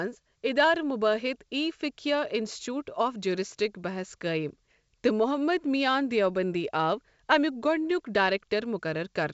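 Nothing stood out on listening to the speech here, which carries the band limit of wideband telephone coding with nothing audible above about 7 kHz.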